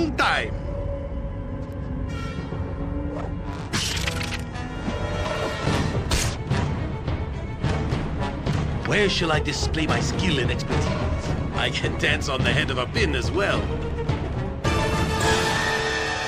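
At 1.73 s and again at 4.02 s, a bit error spike gives a single sharp tick. A flipped bit made the waveform jump by a power of two, then snap back. Each tick is broadband and unrelated to the sound, peaking near about -26 dBFS and about -20 dBFS.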